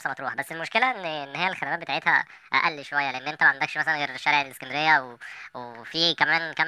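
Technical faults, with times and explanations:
Throughout, wrong sample rate: the speech runs about 1.45 times too fast, and its pitch rises by about 6.5 semitones, so the voice sounds high, hurried and chipmunk-like. This fits audio recorded at 22 kHz being played at 32 kHz with no conversion. Speed and pitch rise together by the same ratio, and vocal resonances move up with them. That sets it apart from a pitch shift, which keeps timing, or a time stretch, which keeps pitch.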